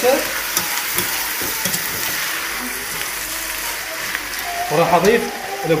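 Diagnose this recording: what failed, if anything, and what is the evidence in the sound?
Nothing here points to a failure at any stage, from the wiring through to playback; the sound holds steady with no breaks, jumps or odd colouring that would hint at something gone wrong.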